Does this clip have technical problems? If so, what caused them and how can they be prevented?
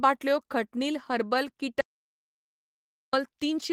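Yes. At 1.81 s the speech cuts off abruptly and the track falls into silence, with no room tone or background hiss underneath, until the speech resumes mid-flow at 3.13 s. About 1.32 s of speech is missing. This is an audio dropout to silence, likely caused by the input being lost while the recorder kept writing silence, for example through a disconnected device, a failed link or an accidental mute. Secure cables and wireless links, disable auto-mute features, and monitor input levels live so that a lost signal is caught immediately.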